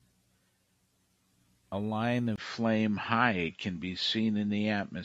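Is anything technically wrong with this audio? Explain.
Yes. From 2.36 s to the end, the speech is affected by an input switched to a poorer device, likely a change to another microphone or a headset's call profile. A gap of about 20 ms marks the switch. After it, nothing remains above 7.6 kHz, so the sound turns duller and boxier. The level shifts by about 5 dB, and a faint new noise floor appears, roughly 55 dB below the speech.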